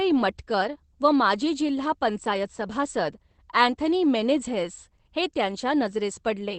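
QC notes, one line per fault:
throughout: Opus voice compression. The speech passes through Opus's SILK linear-prediction coder at a low rate, consistent with about 12 kbps wideband. The band ends near 8.4 kHz, and coarse excitation coding leaves the voice plainly muffled, hoarse and slightly robotic.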